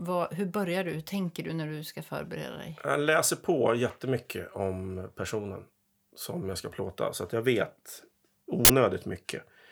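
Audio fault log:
8.65–8.70 s, uninitialised buffer: a sudden, loud burst of harsh digital noise lasting about 46 ms occurs near the end of the clip. It happens because one block of the output buffer was sent to playback before any audio had been written into it, so whatever leftover data sat in that memory was played as raw samples. The length fits a 2048-sample block.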